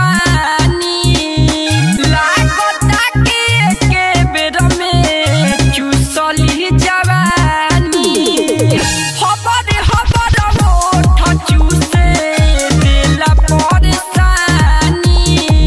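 Nothing in this one trips a fault; you can listen all the way through without a glitch, dropout or distortion turning up anywhere along the way.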